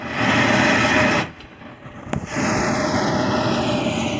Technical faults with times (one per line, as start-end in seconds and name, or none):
0.00-4.20 channels drifting apart